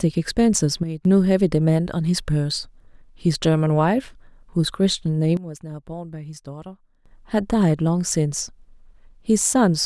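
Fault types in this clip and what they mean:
Sudden gain jump: A digital gain setting was likely applied without any ramp, so the level changes from one sample to the next. The speech and the background noise drop together, by about 10 dB from 0.83 to 1.05 s and by about 14 dB from 5.37 to 7.06 s, then snap back up to full level. Each step in and out is abrupt, with no fade on either edge.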